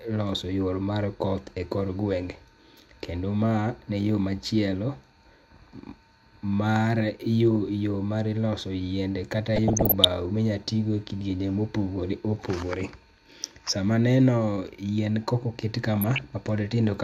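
At 4.27 to 4.39 s, just after "ne yoo", DAB burbling puts a few watery blips over the speech, returning at 9.56 to 10.05 s and 15.97 to 16.32 s, each burst denser. Weak reception lets bit errors, a fraction of a percent and rising, slip through error correction into the MP2 data, corrupting scale factors so single sub-bands leap in level. A spectrogram shows short rectangular patches lighting up isolated frequency bands; the waveform shows chirpy, uneven amplitude bumps.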